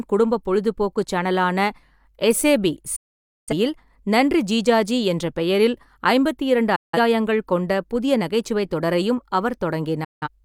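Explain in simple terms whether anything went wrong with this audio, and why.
The speech drops out three times, a digital broadcast dropout: the receiver lost good frames and muted until they returned. Silences run 2.96–3.53 s, 6.76–6.98 s (between "ஜிஜாஜி என்ற பெயரில் ஐம்பத்திரண்டு" and "கொண்ட புதிய நகைச்சுவைத் தொடரையும்"), and 10.04–10.28 s. The missing sound is gone for good.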